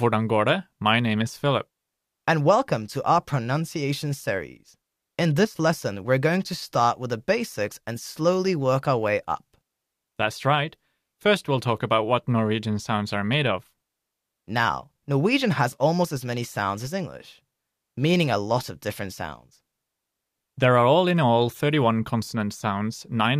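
No technical faults can be heard anywhere in the recording. Nothing in the speech points to a problem in how it was captured, processed or sent at any point.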